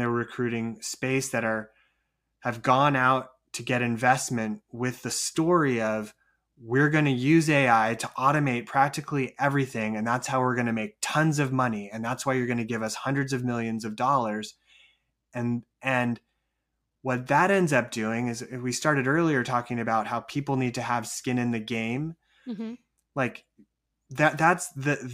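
No technical faults are audible.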